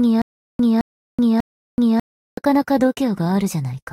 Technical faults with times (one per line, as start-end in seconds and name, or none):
0.00-2.37 stutter with silent gaps